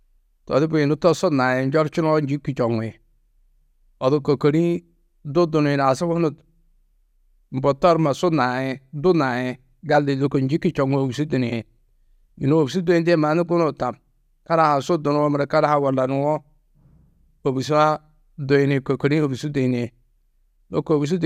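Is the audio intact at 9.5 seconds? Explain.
Yes, at 9.5 seconds the speech runs through cleanly with no fault to be heard at that moment.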